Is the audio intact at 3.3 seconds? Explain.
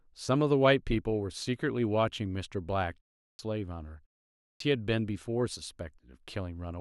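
No. From 3.23 to 3.39 s the speech bursts abruptly out of silence with its opening sounds missing, about 160 ms swallowed. This is a clipped start after a pause: during the 0.3 s gap the output device went to sleep and hadn't woken in time.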